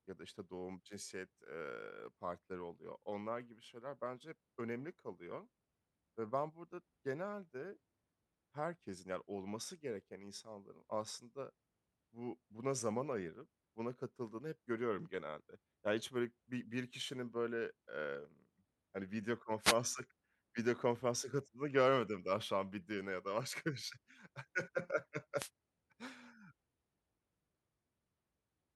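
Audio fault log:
19.59–19.77 s and 25.36–25.50 s, wireless microphone noise hit: two short bursts of static, about 0.19 s and 0.14 s long, the first coming right after "hani video". Each is a brief fade in the analogue FM radio link, where reflected paths cancel the carrier at the receiver. Receiver noise swells, and at the bottom of the fade it breaks into crackle that masks the speech, giving a quick swish rather than a dropout.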